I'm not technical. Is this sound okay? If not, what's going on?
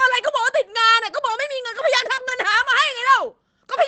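No, not entirely. Just after 2.1 seconds there is a small glitch from a call connection briefly dropping some audio.

From 2.15 to 2.19 s there is a short concealed packet loss: the receiver patched the missing bit by stretching the previous sound, leaving a quick smear or wobble rather than silence.

Within that, from 2.17 to 2.19 s, there is a lost packet rebuilt from error correction: a rough backup copy fills the gap, so it sounds grainy and noisy rather than smeared.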